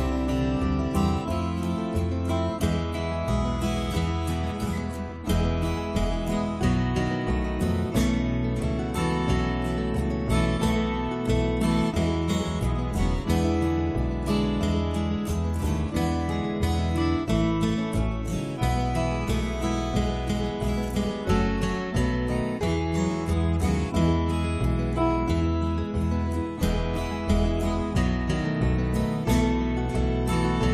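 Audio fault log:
No faults detected in the audio; nothing to log.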